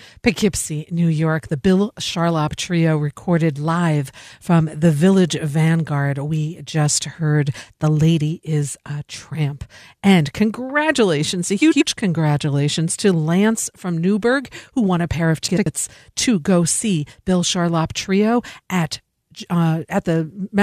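A speech clip with two short bursts of frames out of order. At 11.61 to 11.82 s, after "congratulations a" and before "congratulations to", the sound garbles into a brief flutter. It happens again at 15.48 to 15.67 s, between "won a pair of" and "to go see". In each, two adjacent blocks of about 93 ms arrived swapped and were decoded in that order. That fits runs of four frames each. No time is lost.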